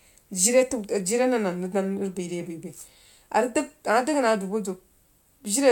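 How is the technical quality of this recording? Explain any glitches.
No glitches or technical faults can be heard here.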